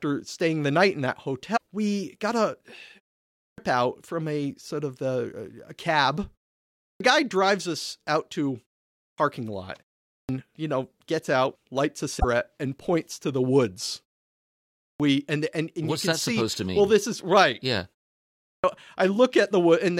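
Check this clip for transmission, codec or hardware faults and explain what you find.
Two faults are present in this speech clip: damaged data in a compressed stream, and clipped starts after pauses.

Damaged data in a compressed stream, 1.53 to 1.60 s and 12.16 to 12.24 s: a brief glitch, each about 75 ms. Corrupted frames make the decoder lose sync and search for the next frame header.

Clipped start after a pause, at 3.38 s (just before "out from a sort"), 6.81 s, 8.97 s (after "drives us out to"), 10.08 s, 14.81 s (before "we and and and") and 18.41 s: speech bursts in abruptly, missing roughly 190 to 225 ms of its onset. The output device sleeps during the preceding silence and wakes too slowly.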